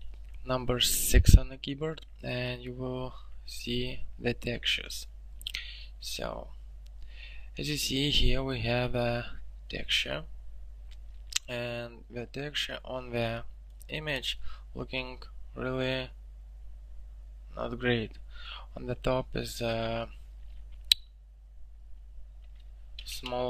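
There are no technical faults to describe in this audio.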